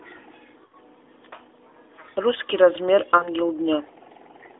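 At 0.66–0.75 s and again at 3.18–3.29 s, lost AMR speech frames make the speech briefly smear and dip as the decoder repeats the last good settings with falling gain. On a spectrogram, the harmonics stretch flat and fade within the 300–3500 Hz narrowband line. The waveform's envelope sags over spans that fit three and then two 20 ms frames.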